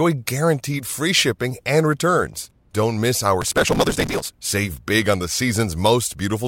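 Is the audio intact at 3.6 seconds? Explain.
No. At 3.6 seconds the speech is broken by processor overload crackle, running from 3.41 to 4.31 s. The processor keeps missing its deadlines for tiny buffers of around 3 ms, and each missed buffer is simply skipped. The many hard-edged gaps pile up into a gritty, tearing crackle.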